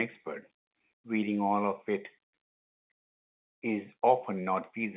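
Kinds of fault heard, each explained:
No faults heard; the speech shows only the 4 kHz band limit and the faint level-following quantisation floor of its mu-law G.711 telephone coding at 8 kHz, as expected for that path.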